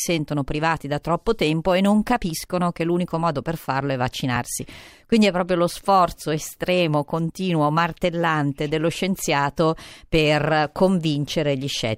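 At 4.35–4.37 s, after "modo per farlo è", and at 7.27–7.32 s, between "proprio lo sforzo estremo" and "martellante dello scienziato per", the speech has compressed frames skipped. Roughly 20 ms of audio goes missing each time, so the speech jumps forward.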